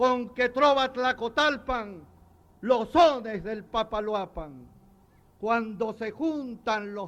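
No technical faults can be heard anywhere in this audio.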